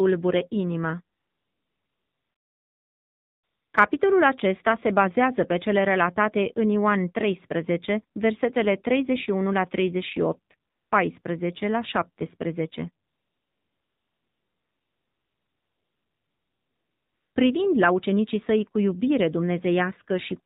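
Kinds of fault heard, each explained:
AMR narrowband mobile codec: old-school phone coding, nothing above 4 kHz, and the speech sounds buzzy and synthetic all the way through, which fits a 7.4 kbps mode.
AMR comfort noise: in pauses the phone stops sending speech and the far end fills in smooth fake hiss, most obviously from 1.2 to 3.7 s and 13.1 to 17.4 s.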